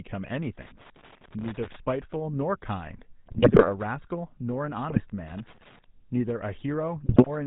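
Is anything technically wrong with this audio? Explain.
Yes. Throughout, the speech has a buzzy, gravelly roughness with nothing above 4 kHz, the plainly audible signature of the GSM full-rate codec, which rebuilds the voice from a vocal-tract model driven by sparse, regularly spaced pulses.

From 3.26 to 3.70 s, 4.90 to 5.04 s and 7.06 to 7.29 s, the speech breaks into squawks, pops and gargling. These are GSM bit errors: corrupted filter, pitch or gain values distort each affected frame.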